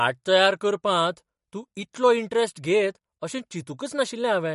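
MP3 compression damage runs through the whole of this speech clip: the audio stops dead at 11.2 kHz, with nothing above, and a watery, swirling texture and smeared consonant onsets are plainly audible. The likely cause is an MP3 encoder starved of bits, which fits a low bitrate around 48 kbps. With so little to spend, it chopped the treble at a fixed cut-off and dropped weak frequency lines that flicker in and out from frame to frame.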